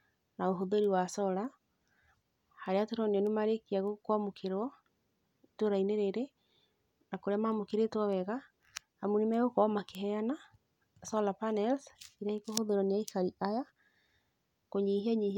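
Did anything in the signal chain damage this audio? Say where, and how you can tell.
Yes: word clock ticks from 0.24 to 14.81 s, around thirty sharp ticks roughly every 0.7 s. An unlocked digital link slips a sample each time, which fits a clock error of roughly 40 ppm.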